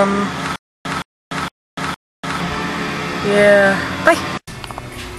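From 0.56 s to 2.40 s there is a stutter with silent gaps: the same 169 ms burst of sound plays four times, each followed by about 293 ms of dead digital silence, so it recurs every 461 ms. The likely cause is a stalled stream replaying its last fragment and then running dry. Unlike a simple dropout, the burst repeats identically; unlike a seamless loop, true silence separates the repeats, and the material meant for that span never arrives.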